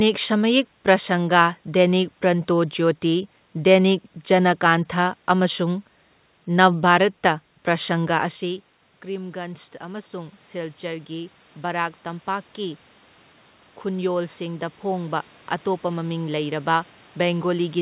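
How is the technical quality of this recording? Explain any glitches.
The technical quality is held back by the gain control twice in the second half. The audio is narrowband, with nothing above 4 kHz, which fits a G.711 telephone-grade call path.

Automatic gain rising occurs from 8.16 to 12.88 s and again from 13.83 s to the end. Around 8 s the talker moves away and the input drops by about 16 dB. The automatic gain control then ramps its gain up by about 7 dB over several seconds, so the voice and the room noise swell together. The second rise lifts the background again in the same way.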